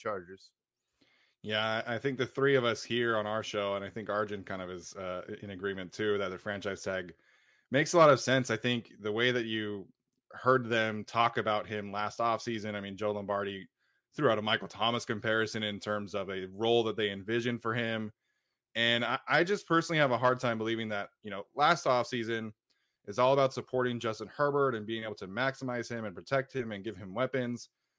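No technical faults can be heard anywhere in the speech.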